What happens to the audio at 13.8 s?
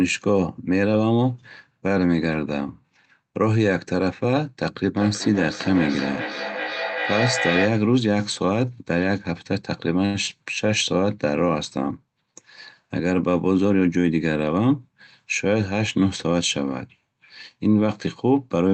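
The speech briefly sounds rushed, running about 15% faster at unchanged pitch from 13.51 to 14.11 s. This is a jitter buffer speed-up: with too much audio queued, the receiver repeatedly cut pitch-period-length slivers, about a tenth of a second in total, to reduce delay.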